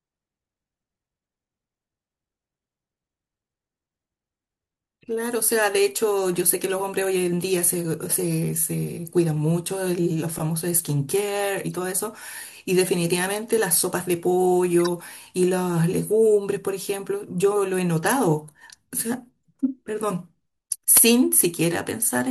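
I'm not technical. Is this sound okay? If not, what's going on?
No. The speech has brief squeaks or blips at 5.02 s (very faint), 6.70 s, 11.70 to 11.78 s, and 14.81 to 14.88 s (the loudest). Each is a corrupt frame decoded: a damaged chunk of compressed audio that the player played anyway, briefly scrambling the sound.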